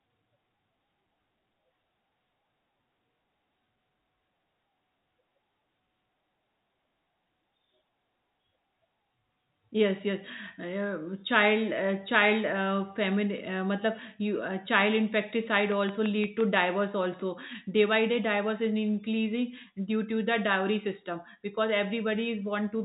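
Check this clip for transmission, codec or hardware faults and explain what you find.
One fault stands out: a train of clicks between 15.72 and 16.58 s. About seven regular clicks arrive at 5.8 per second, peaking about 10 dB above the speech, likely interference from nearby equipment.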